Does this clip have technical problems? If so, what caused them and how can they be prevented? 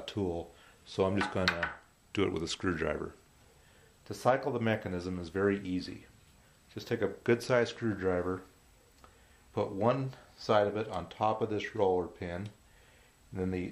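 No, there are no audible technical faults in the clip, so there is nothing to trace to a cause or to prevent.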